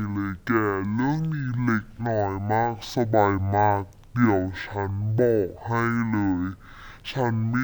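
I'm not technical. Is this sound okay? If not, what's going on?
No. Throughout, the speech plays at half speed and a full octave low. This is stereo read as mono: the left and right samples were read one after the other as a single channel.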